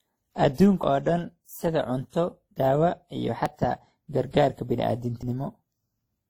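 Speech, carrying two kinds of fault. Throughout, smeared, swirly artefacts of two different codecs sit together, likely from transcoding between lossy codecs. The sound fits a low-rate Opus encode followed by WMA. Sudden skips ahead occur at 0.83, 2.56, 3.46 and 5.23 s. These are likely dropped buffers (overrun), each cutting out roughly 20 to 70 ms.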